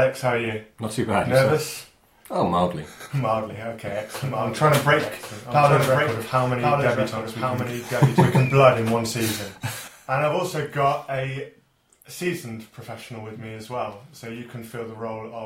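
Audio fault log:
3.87–8.47 s, doubled audio track: a second full-band copy of the sound trails the original by roughly a second, a few dB down, with no decay or room colour on it, and it cuts in and out abruptly. Most likely a slower second capture path or an edit holding two out-of-step copies.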